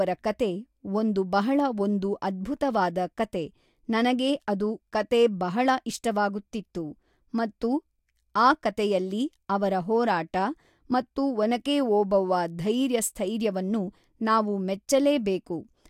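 No technical faults can be heard anywhere in the speech recording; the signal stays steady and intact throughout.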